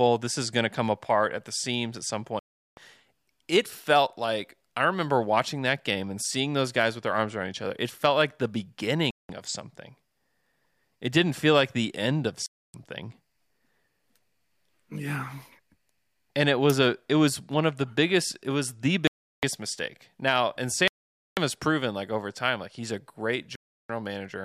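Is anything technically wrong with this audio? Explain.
Yes. The speech stops dead six times, which points to a Bluetooth stall. The gaps fall at 2.39–2.77 s, right after "the seams at some"; at 9.11–9.29 s; at 12.46–12.74 s, after "like the end of"; at 19.07–19.43 s; at 20.88–21.37 s; and at 23.56–23.90 s, after "time like he's a". They last between roughly 0.19 and 0.49 s.

The likely cause is radio interference holding up packets, so the receiver's buffer ran empty and playback froze until the data arrived. What sets this apart from concealed packet loss is that the gaps are true silence, with no smeared or buzzy fill, and the sound then carries on.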